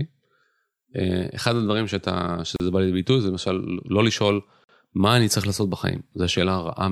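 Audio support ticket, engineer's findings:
Gap at a join of encoded pieces, 2.56–2.60 s and 4.64–4.69 s: speech breaks with a gap of 37 ms, then 49 ms, edges smeared, and resumes where it stopped. Probable component: concatenation stage after encoding. Mechanism: each piece encoded separately, and the encoder's start-up delay plus last-frame padding was never trimmed before joining. Fix: trim priming and padding per segment, or encode the joined stream once.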